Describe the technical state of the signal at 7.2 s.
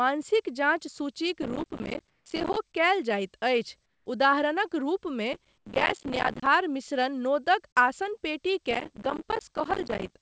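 At 7.2 s the speech is intact, with nothing present above 8 kHz because of the G.722 call path it passed through.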